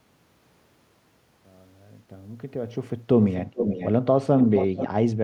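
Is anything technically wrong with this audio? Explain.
Yes. An echo leak appears at 3.30 to 3.34 s, 3.54 to 3.89 s and 4.40 to 4.88 s. A delayed copy of the speech returns about 433 ms late. It is barely audible at first, then nearly as loud as the speech. A far-end loudspeaker echo canceller likely failed to remove it.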